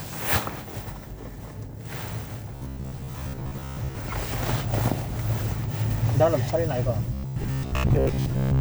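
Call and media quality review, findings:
Robotic sound from repeated short buffers, 2.56–3.95 s and 7.14–8.6 s (to end). Rigid metallic buzz at 66.7 Hz; likely underrun looping a 15 ms chunk, most real audio skipped. Spectrogram: evenly spaced 66.7 Hz harmonic comb. Waveform: identical repeating cycles.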